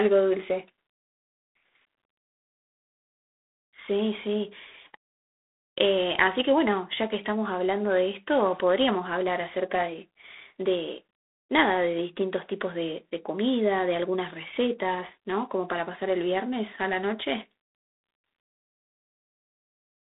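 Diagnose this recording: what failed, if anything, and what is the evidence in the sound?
G.726 ADPCM, throughout the clip, at the codec stage. The speech carries a harsh, rasping hiss that rises and falls with its level, over a telephone band of about 250 Hz to 3.7 kHz with nothing above 3.9 kHz. At 24 kbit/s each sample's prediction error gets only three bits, so quantisation noise rides on the speech.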